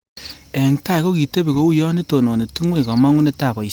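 No technical faults are audible in this speech.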